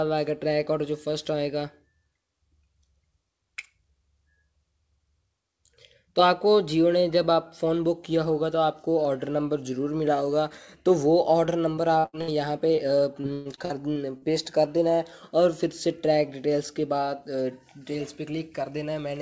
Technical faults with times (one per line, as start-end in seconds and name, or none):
11.46-12.30 repeated packet loss (robotic sound)
12.76-12.79 short concealed packet loss
13.21-14.24 repeated packet loss (robotic sound)